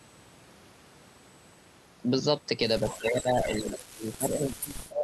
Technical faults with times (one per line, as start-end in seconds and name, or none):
2.81-5.03 speech suppressed in double talk
2.90-2.98 echo leak
3.51-3.69 echo leak